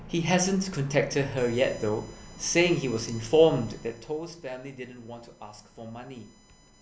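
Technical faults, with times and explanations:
1.37 s onward: USB whine, a fixed 1 kHz pitch peaking at its 7 kHz harmonic, roughly 25 dB under the speech, from 1 ms bus-frame current leaking through power or ground.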